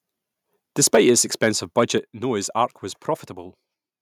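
From 0.83 to 1.1 s, then 1.43–1.48 s and 1.78–1.83 s, loud syllables crackle harshly. This is likely microphone overload, with peaks driven about 6, 3 and 2 dB past the converter's limit. On the waveform the tops are flattened, and the spectrogram shows bright broadband splatter. At 0.95 s and 1.98 s the level drops abruptly by about 3 dB and then about 6 dB. This is likely the microphone volume being stepped down by the call software, and it appears as sudden narrowing steps in the waveform envelope.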